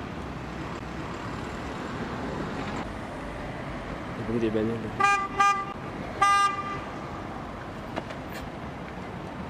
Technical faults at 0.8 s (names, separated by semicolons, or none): CD skip